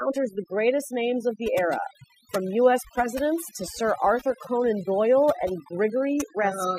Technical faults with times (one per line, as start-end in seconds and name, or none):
0.00-6.79 overdone noise removal